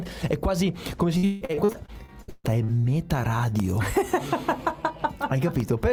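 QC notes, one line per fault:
1.17–2.86 s, repeated packet loss (robotic sound): packets went missing again and again, a dozen or so holes, the longest about 161 ms. Each was patched by extending the previous sound, so over a third of the stretch is synthetic, giving choppy audio with pieces missing.
3.60–5.60 s, periodic USB or driver dropouts: a background task stalled the USB bus or audio driver once per second, roughly three times, each time dropping about half a millisecond of audio and leaving silence. The brief, evenly spaced gaps sound as regular ticks.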